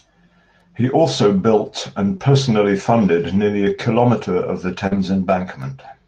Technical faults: short concealed packet loss; lost packet rebuilt from error correction

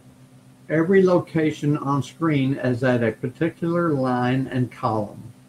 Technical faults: none

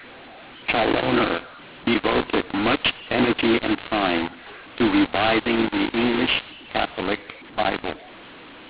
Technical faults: mu-law and A-law mixed up

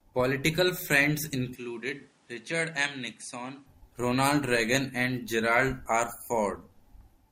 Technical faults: input switched to a poorer device

